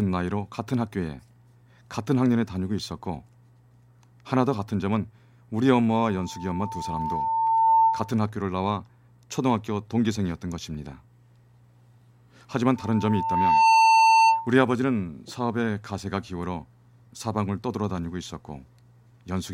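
Speech with two bursts of loudspeaker feedback squeal, from 6.02 to 8.17 s and from 12.76 to 14.54 s. Each is a single tone near 898 Hz that swells over roughly a second and a half the first time and about a second the second time, until it sits around 10 dB above the speech. The microphone is hearing its own loudspeaker, and at that one frequency the loop gain exceeds unity, so the tone reinforces itself until the loop is broken.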